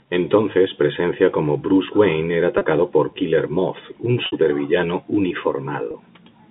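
At 2.58 s, 4.26 s and 5.91 s the speech briefly turns into a held, buzzy drone. This is packet loss with pitch repetition: the receiver bridged each gap by repeating the last pitch cycle. The 30 ms gaps at 2.58 and 5.91 s fit a single lost packet. The 60 ms gap at 4.26 s, about two packets, starts to fade before speech resumes. A plain dropout would leave silence instead of a sustained tone.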